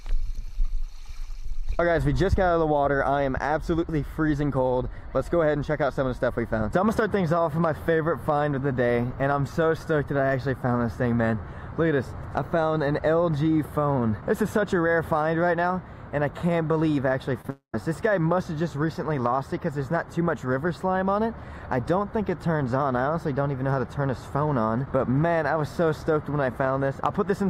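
At 17.41 to 17.45 s and again at 17.47 s there are two short concealed packet losses. About 20 ms and then 10 ms of audio failed to reach the decoder in time, and the receiver covered each gap by extending the preceding sound before blending back into the real signal. Each is heard as a brief smear or wobble.

From 17.50 to 17.74 s the gap grows into what is likely a long network dropout. About 240 ms of audio is lost. The receiver's continuation of the last sound, which turns into a fading buzz or hiss, lasts roughly 120 ms before giving way to around 110 ms of silence. The sound then resumes further on, without the missing stretch. The trailing silence and the lost material are what separate it from the two short concealed losses, which only blur the audio.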